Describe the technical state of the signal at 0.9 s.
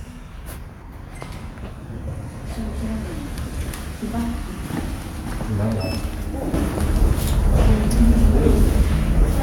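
At 0.9 s the signal sits inside a sudden gain jump spanning 0.82 to 0.92 s. The digital gain was likely changed from one sample to the next with no ramp, so the sound and its background noise drop together by about 4 dB in one abrupt step.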